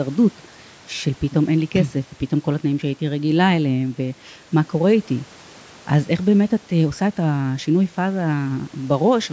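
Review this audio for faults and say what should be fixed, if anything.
Nothing here needs fixing: the speech has passed through normal call microphone processing, which trims the lowest bass with its high-pass filter and leaves no content above 8 kHz, and no faults can be heard in the signal.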